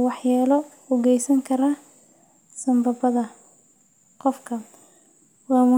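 Speech recording, and nothing is technically wrong with it.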